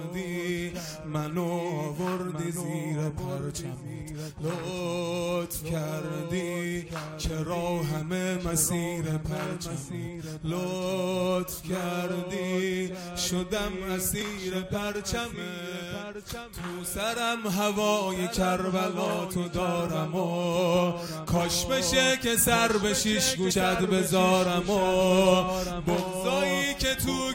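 At 23.50 s there is a single brief glitch caused by damaged data in a compressed stream: corrupted bytes made the decoder misread a frame and lose sync until it found the next frame header.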